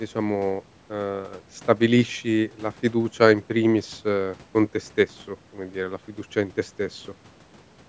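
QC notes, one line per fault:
No faults to note in this speech clip; the call microphone processing trimming the lowest bass is normal.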